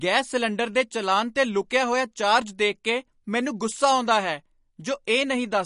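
The speech sounds watery and swirly throughout, with plainly audible smearing on consonant attacks and nothing above about 10.6 kHz. This points to MP3 compression, likely at a low bitrate around 40 kbps, where the encoder cuts the treble and drops weak frequency components frame by frame.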